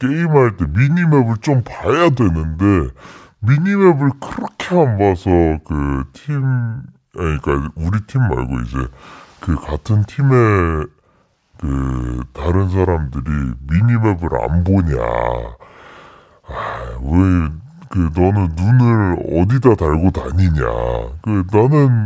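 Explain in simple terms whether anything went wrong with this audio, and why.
Something went wrong for the whole clip, start to finish. The fault is a wrong sample rate. The speech plays at about two thirds of its proper speed. Every voice sounds slow, heavy and deep, about seven semitones lower than it should. That is roughly a musical fifth. Speed and pitch drop together, and that points to the cause. It fits audio recorded at 24 kHz but played back as if it were 16 kHz, with no conversion in between.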